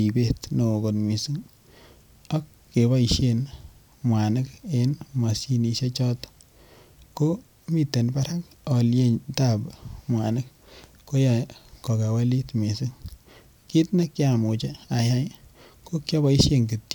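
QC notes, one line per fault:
No faults found in this speech recording.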